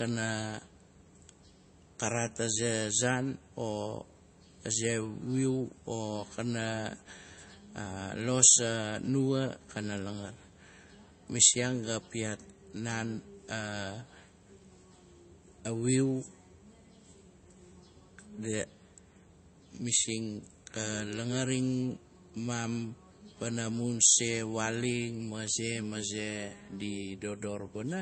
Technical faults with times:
0.00-28.02 MP3 compression

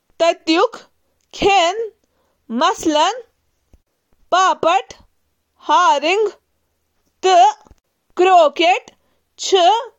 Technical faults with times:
none

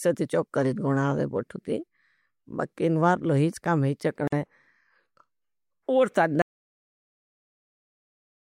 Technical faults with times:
4.28-4.32 gap at a join of encoded pieces
6.42-8.60 audio dropout to silence

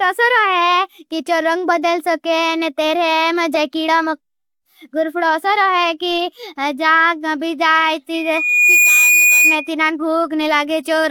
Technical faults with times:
8.14-9.70 loudspeaker feedback squeal

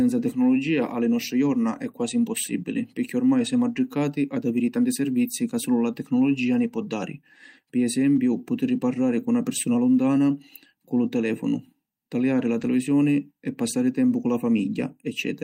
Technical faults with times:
8.15-8.17 lost packet rebuilt from error correction
12.61-12.67 lost packet rebuilt from error correction

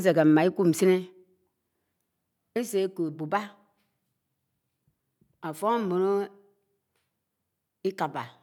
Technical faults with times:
none

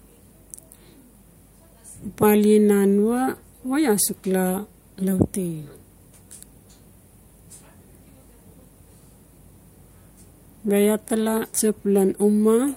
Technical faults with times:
none

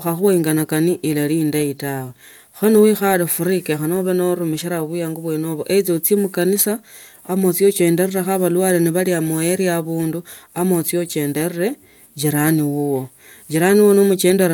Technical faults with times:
none

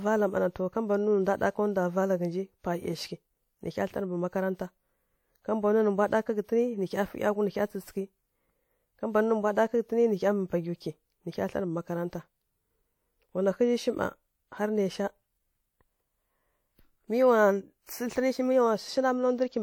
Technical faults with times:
17.83-17.89 pre-echo

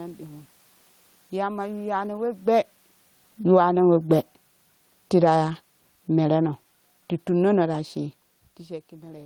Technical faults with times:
3.38-3.72 automatic gain falling
3.63-4.09 automatic gain rising

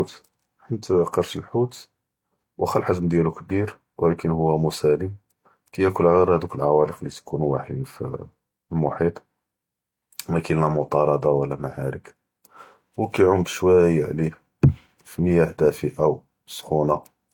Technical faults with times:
0.00-17.34 transcoding between lossy codecs

